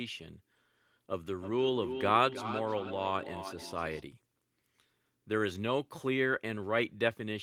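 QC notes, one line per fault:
1.23–4.04 s, feedback echo between two devices: speech returns roughly every 300 ms, peaking about 8 dB below the voice, as a second device replays it.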